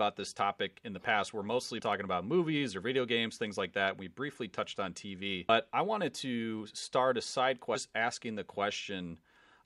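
At 5.48 s the speech is broken by a brief glitch, the mark of damaged data in a compressed stream. A short stretch of the encoded data was corrupted, so the decoder misread those frames, lost sync and had to search for the next valid frame header. What sets it apart from a plain dropout or click is its cause: the decoder losing its place in the stream rather than a fault in the audio signal itself.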